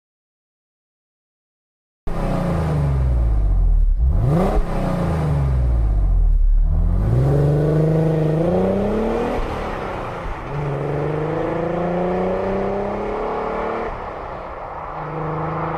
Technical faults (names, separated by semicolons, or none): audio dropout to silence